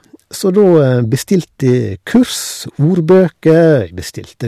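From 0.57 to 1.75 s the speech runs into hard clipping: the level sits about 3 dB above what the chain can pass, so the peaks get sliced flat and you hear crackly grit on the louder syllables. It comes back briefly from 2.15 to 2.22 s, overdriven by about 4 dB, then again from 2.85 to 3.74 s at about 5 dB over, where the flattened tops throw off high harmonics and the peaks crackle again.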